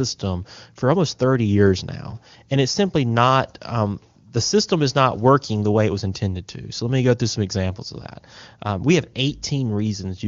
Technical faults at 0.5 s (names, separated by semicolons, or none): none